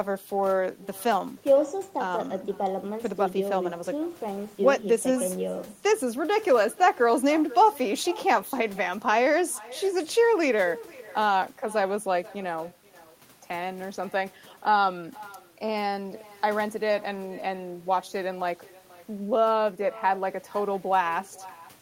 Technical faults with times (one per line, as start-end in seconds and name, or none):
0.00-21.81 echo with no canceller